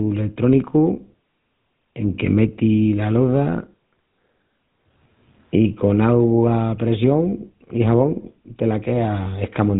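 The whole speech clip carries GSM full-rate codec damage. Nothing survives above 3.8 kHz, and the voice turns buzzy and gravelly, consistent with a 13 kbps pulse-excited coder.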